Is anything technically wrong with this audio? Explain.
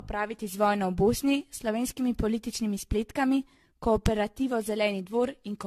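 Yes. Throughout the speech there is generation loss: a swirly, hollow smear with blurred consonant attacks and nothing above 14 kHz. A single 64 kbit/s AAC encode would not sound this damaged; the likely cause is around ten re-encodes, each on a shifted frame grid, compounding quantisation noise and spectral holes.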